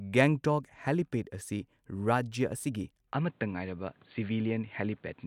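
At 3.13 s the recording's input was likely switched to a poorer device, and the rest of the clip comes through it. From that point nothing above 4.6 kHz reaches the recording, so the speech abruptly loses its upper frequencies. There is no gap at the switch and the level stays about the same. A different background noise, well below the speech, appears with the new device and runs to the end.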